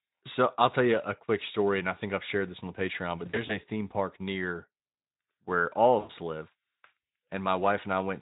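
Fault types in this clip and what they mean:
VoIP packet loss concealed by the speech codec: when packets drop, the decoder fills the gap by repeating its last pitch and filter at falling gain, so speech smears into a fading buzz. Around 3.25 to 3.58 s about 100 ms goes missing in short scattered runs of up to 40 ms, and again near 6.00 to 6.12 s. A spectrogram shows flat, repeated harmonics thinning out, and the waveform shows a decaying periodic envelope, all within the light Speex coding.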